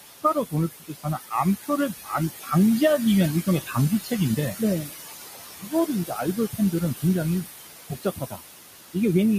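Noise suppressor artifacts run through the whole clip. The suppressor treats bands it judges to be steady noise and pulls them down by about 17 dB, frame by frame. The room noise, sitting only about 8 dB under the speech, sinks in the gaps and swells back beneath each phrase. On a spectrogram the noise floor looks patchy and speckled, with isolated time-frequency cells flickering on and off between phrases.

Speech cut by the noise suppressor comes in five stretches: 0.07 to 1.7 s, 2.02 to 2.52 s, 3.44 to 4.94 s, 5.59 to 7.04 s, and 7.88 to 8.42 s. In each, the suppressor mistook quiet parts of the speech for noise and dropped them by about 19 to 21 dB, for a few hundred milliseconds in total per stretch. Consonants and word endings sound swallowed or faint. The waveform shows abrupt dips inside phrases, and the spectrogram shows gaps where soft high-frequency consonant energy should be.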